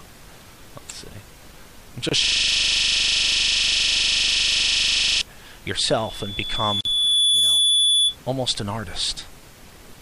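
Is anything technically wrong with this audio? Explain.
Yes, three kinds of fault are audible.

From 2.09 to 2.12 s and from 6.81 to 6.85 s there is a gap at a join of encoded pieces. Separately encoded sections were joined without trimming their padding. This leaves silences of about 25 and 44 ms, with abrupt, slightly smeared edges, before the sound resumes where it stopped.

From 2.24 to 5.21 s a system hang loop takes over. The system froze while the audio hardware kept replaying the same 40 ms of its buffer, dozens of times. At 25 repeats per second it sounds like a rapid, mechanical stutter.

From 5.88 to 8.16 s there is a loudspeaker feedback squeal. A microphone picked up its own loudspeaker, and the loop gain passed one at 3.4 kHz. A single tone swells over about one and a half seconds to roughly 10 dB above the sound.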